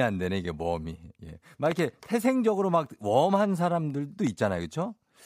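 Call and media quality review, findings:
Loud pop at 1.72–1.81 s (double, about 15 dB above speech) and 4.27–4.29 s (single, about 5 dB): likely plug/switch or driver voltage step; speech continues underneath, unlike a dropout.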